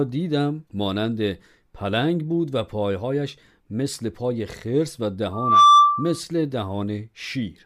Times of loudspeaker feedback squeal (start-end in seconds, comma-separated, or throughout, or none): 5.33-6.20